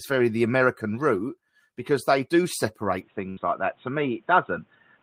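From 3.01 s, right after "route because they do", the speech turns dull and boxy, with nothing above 3.8 kHz. There is no gap at the change, the level stays about the same, and a faint new noise floor sits roughly 40 dB down. The likely cause is the input switching to a poorer device that passes a narrower band.

At 3.29 s to 3.39 s, a burst of packet loss stretches the last sound into a held, fading tail for 74 ms. Speech then resumes with about 80 ms missing, because the receiver concealed the gap by continuing and attenuating what it last had.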